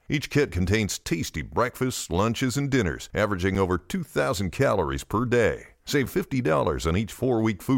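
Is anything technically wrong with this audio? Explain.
Yes. Gaps between chunks appear at 1.04 s (after "kit contains"), 3.55 s (after "breakfasts lunches and dinners") and 6.06 s. The speech was delivered in 2.5-second chunks with about 7 ms of silence left at each join, so nothing is lost but the sound breaks into brief holes.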